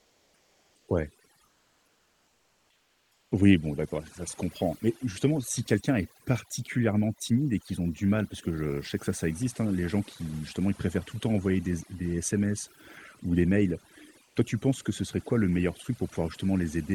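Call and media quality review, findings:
Overdone noise removal, whole clip. Background pushed to near silence with twinkling specks; quiet speech detail lost with the noise. Spectrogram: isolated bright dots scattered over a dark floor, ragged speech harmonics with holes. Waveform: near-flat gaps between phrases. Component: noise suppressor, threshold too aggressive. Individual bands gated off whenever near the noise estimate. Content above roughly 12 kHz is absent, fitting the Opus call path's bandwidth.

Comfort noise in place of the background at 0.00–0.85 s, 1.45–3.31 s and 14.23–14.35 s. Real background replaced by steady, featureless hiss, about 3 dB lower in the first two spans and about 6 dB lower at 14.23 s. Spectrogram: smooth, even noise band with no texture, level step at each edge. Waveform: uniform low-level fill. Component: likely Opus DTX, with the receiver synthesizing noise while transmission pauses.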